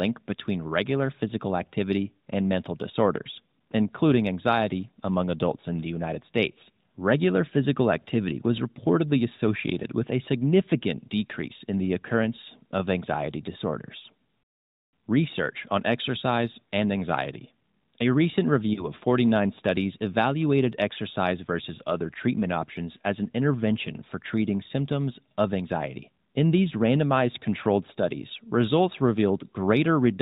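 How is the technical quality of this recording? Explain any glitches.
Two brief glitches on top of a narrowband AMR mobile line with only light codec damage, so everything above 4 kHz is missing. Both are lost AMR speech frames, around 18.74 to 18.86 s and 20.94 to 20.98 s (between "studies evaluated" and "versus other treatment options"). Each sounds like a quick dip or warble, which fits a single corrupted frame that the decoder patched by reusing its last good settings at reduced gain.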